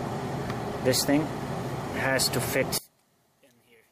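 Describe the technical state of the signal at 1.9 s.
At 1.9 s the signal is intact, with no audible technical fault.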